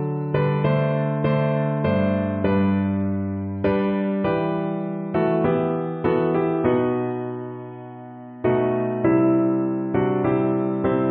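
No technical faults can be heard anywhere in the clip. There is nothing to point to at any moment.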